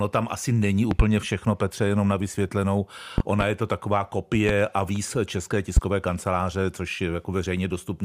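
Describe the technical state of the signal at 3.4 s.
A loud pop spans 3.18 to 3.44 s, after "jenom na vysvětlenou" and before "je to taková": two sharp thumps, roughly 20 dB above the speech, which continues underneath. A voltage pulse from a switch or static discharge is the likely cause. The waveform shows two tall spikes, and the spectrogram shows two thin broadband vertical stripes.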